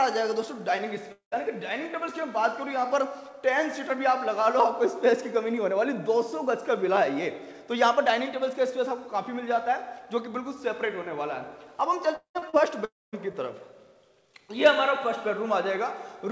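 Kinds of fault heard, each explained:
Long network dropout: A stretch of sound likely never reached the receiver, which carried the last sound on as a fading buzz before leaving a quiet gap. This happens at 1.12 to 1.35 s and 12.16 to 12.38 s, each about 0.2 s long, and at 12.85 to 13.16 s, about 0.3 s. What follows resumes without the missing part. The audible trailing-off into near-silence sets it apart from the brief smears of concealed loss.
Short concealed packet loss: Around 40 ms of audio went missing, and the receiver patched the hole by extending the preceding sound for about 30 ms before blending back into the real signal. It happens twice, at 12.39 to 12.45 s and 12.50 to 12.56 s, just after the second dropout. Each is heard as a quick wobble or smear, with no fade to silence. That lack of a silent gap is what separates it from a long network dropout.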